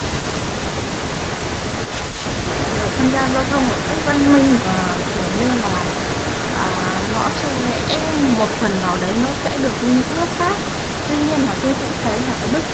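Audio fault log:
Throughout, echo leak: an echo canceller on one side likely let part of what its microphone caught from the loudspeaker through, so a delayed copy of the speech returns about 235 ms behind the original, roughly 10 dB quieter.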